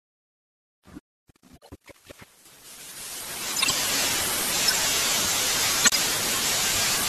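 Speech, with a section at the wrong speed from 1.59 to 3.27 s, where the audio runs 1.53 times too fast and the pitch rises by about seven semitones, so the voice turns high and hurried before dropping back. The likely cause is an editor or player fitting that stretch to the wrong clock. From 5.83 to 5.98 s there is a corrupt frame decoded, heard as a short chirpy burst where misread codes or wrong gains put energy at the wrong frequencies. A burst of about 150 ms points to several consecutive damaged frames rather than a single one.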